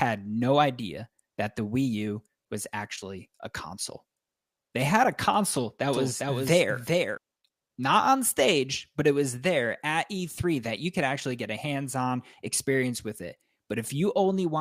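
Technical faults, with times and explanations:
5.93–7.17 s, doubled audio track: just after "had a console that", a second full-band copy of the speech joins the first, trailing it by roughly 0.4 s and sitting about 5 dB lower. It carries no decay or room colour, so it sounds like a clean overlapping echo rather than reverberation, and it switches on and off abruptly. The likely cause is the same signal being captured again through a slower path, or an edit leaving two offset copies layered.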